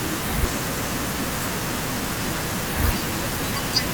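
No technical faults can be heard anywhere in the speech. At no point does the audio show a problem that would trace back to how it was captured, carried or reproduced.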